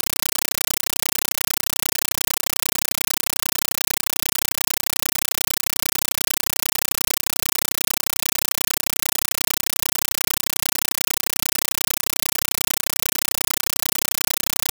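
Throughout, the sound is replaced by a compressed stream played as audio: undecoded Dolby Digital data read as samples. Each frame becomes an 8 ms noise burst then silence, 31.25 times a second. Unlike random interference, this loud static chatters at a fixed frame rhythm.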